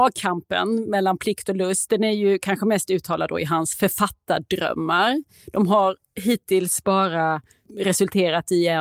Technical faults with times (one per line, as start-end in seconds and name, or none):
none